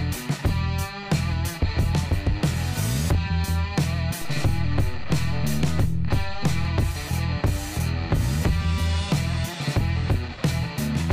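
At 4.22 s the waveform's zero line jumps to an offset of about -26 dBFS, a DC step, and holds there until it drops back at 6.65 s. Each jump is heard as a low thump, while the sound itself continues unchanged.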